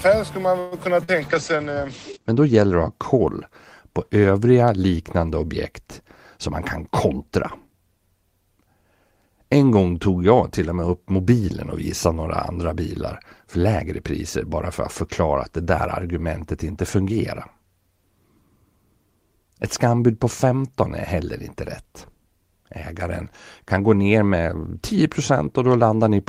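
A call audio freeze runs from 0.59 to 0.75 s, right after "skulle man". Packets were most likely held up in transit, so the jitter buffer emptied and the receiver stretched the last sound into a fading buzz or hiss for about 122 ms. The speech then resumes where it stopped, nothing lost but now 122 ms later.

Short concealed packet loss follows at 1.04 to 1.11 s. About 40 ms of audio never reached the decoder in time, and the receiver patched the hole by extending the preceding sound before blending back. The result is a brief smear or wobble in the speech.

A call bitrate drop spans 1.21 to 3.42 s, ending just before "på övriga liknande objekt". The encoder fell from 32 to 12 kbps, sitting at the lowest rate for 1.13 s, and its audio bandwidth shrank from 20 kHz to 8 kHz. The speech turns rough and muffled, losing its upper frequencies until the rate recovers.

A jitter buffer speed-up covers 6.37 to 7.88 s, after "på övriga liknande objekt". 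With excess audio queued, the receiver trimmed short pitch-period slices repeatedly, about a tenth of a second in total. The speech runs at 106% speed at unchanged pitch, sounding slightly hurried.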